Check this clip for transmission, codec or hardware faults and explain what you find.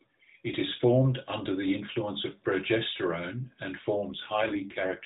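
One fault is present: an AMR rate drop in the narrowband mobile codec, whose 4 kHz band ceiling is audible throughout.

From 4.12 s to the end, the voice turns rougher and more synthetic with no gap or band change, which fits the link forcing AMR from 12.2 down to 5.9 kbps.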